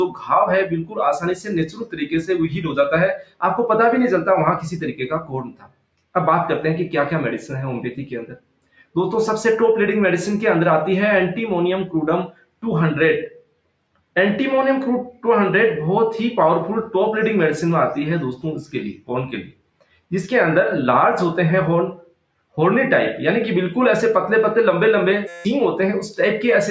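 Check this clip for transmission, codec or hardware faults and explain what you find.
Three faults are present: a speech noise suppressor processing non-speech sound for the whole clip, repeated moments where that suppressor cuts the sound, and a brief system hang loop near the end. The call microphone processing works as expected, and its band limit leaves nothing above 8 kHz.

Noise suppressor applied to music or sounds, throughout. A suppressor designed for speech treats sustained, steady content as noise and lowers it, so the level swings by around 10 dB as it decides what to keep. Onsets pass while held portions and decays sink, giving a pumping, thinned character. On a waveform the envelope looks uneven, with tails clipped short. A spectrogram shows sustained bands fading and then returning abruptly.

Sound cut by the noise suppressor, at 0.08–0.26, 0.83–3.42, 5.21–6.15, 8.31–8.96, 12.27–12.63, 13.28–14.16, 18.65–20.12 and 21.97–22.57 s. 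In each span the suppressor judged the material to be noise and pulled it down harder than its surroundings. The drop is about 9 dB in the first span and about 19 dB in the rest. The sound audibly sinks in level or its decay is cut short. The waveform shows hollowed-out stretches, and the spectrogram shows dark gaps where steady energy should continue.

System hang loop, 25.28–25.45 s. The computer or driver stalled while the audio hardware kept replaying the same ring buffer. The result is one 5.8 ms slice repeating exactly, about thirty times, which fits a 256-sample buffer. Roughly a fifth of a second of real audio is lost and replaced by a steady 172 Hz buzz. A waveform shows an identical short cycle tiled end to end. A spectrogram shows a comb of harmonics spaced 172 Hz apart.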